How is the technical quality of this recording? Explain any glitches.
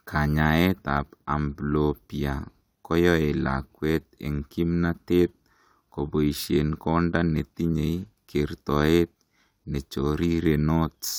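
Nothing in this recording sounds like a glitch, so there's nothing here to explain.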